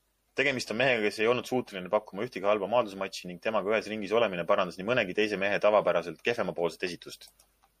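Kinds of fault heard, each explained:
MP3 compression: The damage is plainly audible through the whole speech clip, and lossy MP3 encoding is the likely cause. The encoder divides the sound into narrow frequency lines and spends its limited bits where hearing is most sensitive. Starved of bits, it drops the top of the spectrum and lets faint lines flicker on and off between frames. The result here is a watery, swirling quality. The level of damage fits a bitrate of around 64 kbps.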